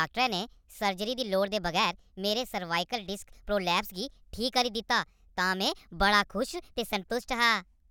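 From start to finish, the speech runs fast and high: a wrong sample rate. Playback is about 1.38 times too quick, raising pitch roughly 5.5 semitones. That fits 32 kHz audio played at 44.1 kHz.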